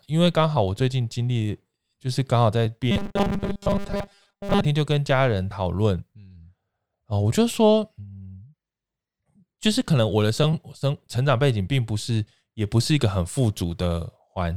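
From 2.91 to 4.65 s, the speech turns into robotic sound from repeated short buffers: a rigid 200 Hz metallic buzz, likely from about 5 ms segments looping for most of the stretch. A spectrogram would show even harmonic stripes, and the waveform would show identical 5 ms cycles.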